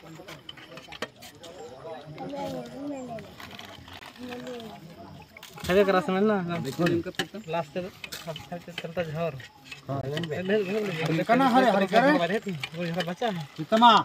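At 3.99 to 4.01 s, and again at 10.01 to 10.03 s, the sound stops dead for 20 ms. This is a gap between chunks. The audio arrived in 6-second pieces, and silence was inserted at each join. Nothing is lost. The holes simply have abrupt edges.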